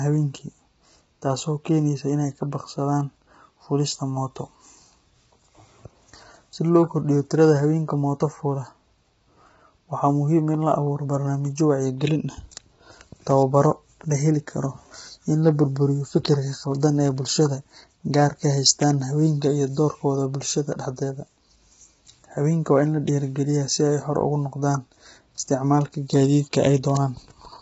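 Throughout the clip, the speech was likely squeezed through low-delay AAC compression at a very low bitrate, heavy enough to suggest something near 16 kbps. Short frames blur the pitch harmonics, so voices sound rough and grainy, with noise between harmonics and nothing above 7.8 kHz.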